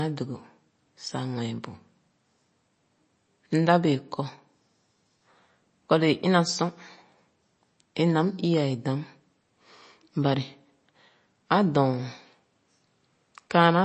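Throughout, the speech carries plainly audible damage from likely MP3 compression: nothing above 8.3 kHz, a watery swirl and smeared consonants, consistent with a bitrate near 32 kbps.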